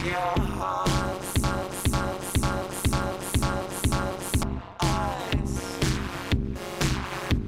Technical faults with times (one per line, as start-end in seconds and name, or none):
0.00-7.47 overlap-add ripple
1.44-4.43 broken-record loop